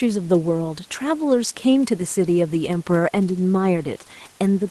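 Nothing goes wrong in this recording, just speech carried over an ordinary call connection with some quiet background room noise sitting about 33 dB below it.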